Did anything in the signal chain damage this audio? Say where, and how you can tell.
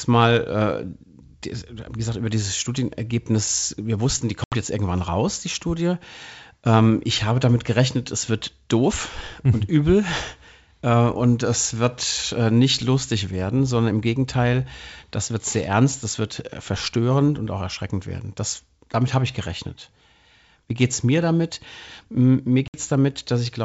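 Yes, there's packet loss on an ADPCM call at the network stage. You get hard-edged silent holes at 4.44 to 4.54 s and 22.68 to 22.78 s, each a few packets' worth. The decoder's predictor and step size drift from the sender's, so the sound returns slightly distorted and settles within tens of milliseconds.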